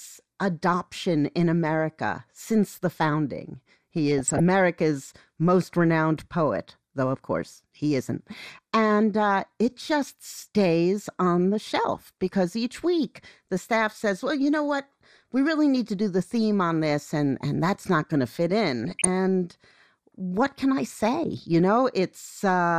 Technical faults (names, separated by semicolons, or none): MP2 compression; DAB burbling